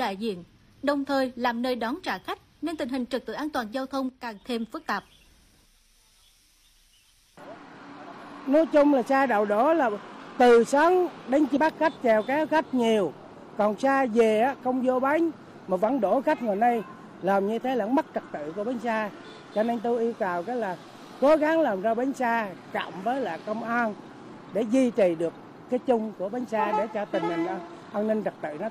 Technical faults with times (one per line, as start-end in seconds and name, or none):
4.09-4.41 one channel drops out
11.52-11.57 stream segment skipped